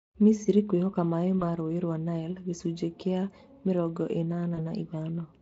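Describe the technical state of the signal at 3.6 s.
At 3.6 s the speech is intact, with nothing beyond the light coloration of the Speex coding heard throughout.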